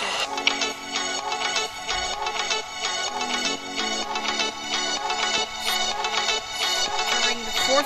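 No technical faults can be heard anywhere in the recording. There is nothing in the audio that needs a timestamp or further comment.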